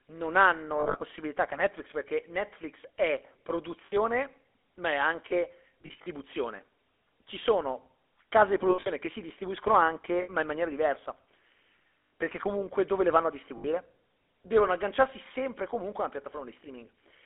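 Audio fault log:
throughout, GSM full-rate codec: The band is limited to about 300 Hz to 3.5 kHz, with a plainly audible buzzy, gravelly roughness. The coder models the vocal tract and drives it with a sparse, regular pulse train, which fits a 13 kbps full-rate stream.
0.80–1.01 s (after "non hanno"), 3.86–3.93 s, 5.82–6.07 s, 8.70–8.88 s (between "case di" and "che si distribuiscono"), 10.22–10.29 s (before "ma in maniera diversa"), 12.00–12.12 s, 13.58–13.66 s, lost GSM frames: Missing frames are concealed by repeating the last good frame at falling level, which produces a rough, metallic ring. The losses total 60 to 160 ms per event, and in the longer events they are scattered in bursts of up to roughly 70 ms.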